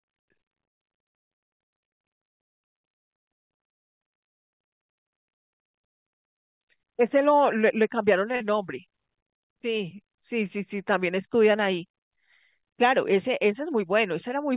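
From 4.69 to 5.12 s the speech locks into a system hang loop: the machine stalled while the sound hardware kept replaying its ring buffer, so one 85 ms slice repeats five times at about 11.7 per second. That length fits a 4096-sample buffer. The result is a rapid machine-gun stutter rather than a buzz. Every repeat is an exact copy, which separates it from concealment, and little or no audio is lost once playback resumes.

At 8.36 to 8.42 s comes a short concealed packet loss. About 40 ms of the call arrived too late for the decoder, and the receiver bridged the gap with 41 ms of synthetic continuation before blending back into the real signal. This shows up as a single brief smear or wobble, not a repeating pattern. Unlike the loop, nothing is replayed verbatim, and the patch carries the same 4 kHz bandwidth ceiling as the rest of the G.711 call audio.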